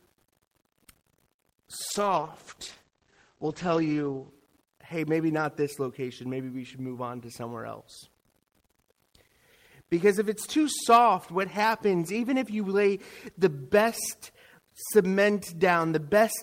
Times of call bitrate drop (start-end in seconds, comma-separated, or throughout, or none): 1.91-4.36